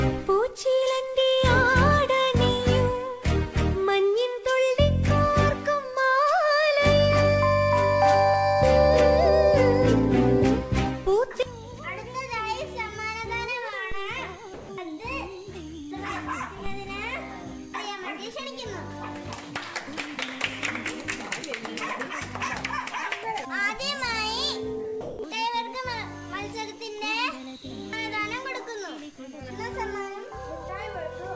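At 13.92 s and again at 16.66 s there is a DC step: the waveform's zero line jumps suddenly and the offset then drains away slowly, like a very low high-pass around 2 Hz. Each one is a low thump under sound that carries on intact, which separates it from a dropout or a click caused by damaged samples.

From 14.54 to 14.69 s, about 150 ms of background, sitting roughly 19 dB below the loud parts, turns into smooth, featureless comfort noise about 1 dB quieter. Discontinuous transmission is the likely cause. Unlike a voice-detector dropout, no actual sound goes missing here, only the texture of the background.

From 25.01 to 25.19 s, 180 ms of real sound is dropped by the voice detector, likely because the sender judged it to be background, and steady comfort noise plays in its place. The gap is filled with noise rather than true silence, and the sound then returns when the detector triggers again. 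Throughout, nothing is heard above 8 kHz, which fits wideband G.722 call coding.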